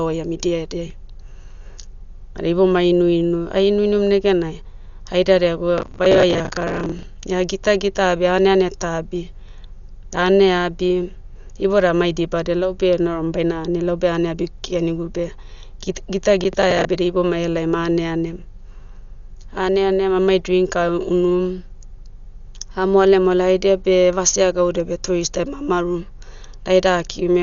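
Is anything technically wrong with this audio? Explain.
Yes, two things. The whole clip is dull and band-limited, with nothing above 6.9 kHz and a rough, fluttery noise clinging to the speech. That's likely heavy Dolby Digital compression, which fits a low bitrate around 48 kbps, where lines starved of bits get filled with dither noise.

There's also processor overload crackle from 5.78 to 7.03 s and again from 16.41 to 16.85 s, just before "da ibomai aleaim aneanem". Buffers of roughly 10 ms miss their deadlines in runs, dozens in the first burst and about ten in the second. Each miss replays a scrap of old audio with hard edges, so you hear gritty tearing riding on the speech.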